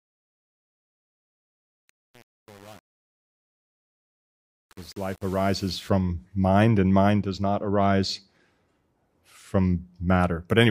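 From the start to about 5.89 s, the fade suffers truncation distortion: the gain stage keeps roughly 7 bits with no dither, so the quiet end of the fade turns into coarse square steps, sounding gritty.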